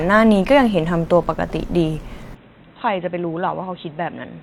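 At 2.35 s the speech turns dull and boxy, and stays that way to the end. Nothing passes above 3.9 kHz. The level drops about 5 dB. New background noise sits roughly 35 dB below the speech. There is no gap. Likely the input switched to a poorer device.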